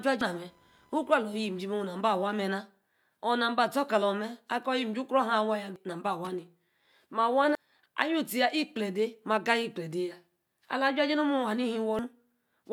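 A speech recording opens with a thin, buzzy chirping from the start to about 2.26 s, pulsing at roughly 1 kHz and sitting around 35 dB below the speech. It follows the computer's workload rather than anything in the voice, which marks it as computer activity noise: shifts in processor, graphics or mouse load disturb the ground shared with the audio circuitry, and that interference leaks into the signal until the activity settles. Separately, brief squawks or blips break into the sound at 0.21, 5.76, 7.55 and 11.99 s. Each is a single short event, the kind produced by damaged data in a compressed stream. At those points the encoded data has been corrupted, so the decoder misreads or drops the affected frame, loses its place and has to hunt for the next valid frame header before playback resumes cleanly.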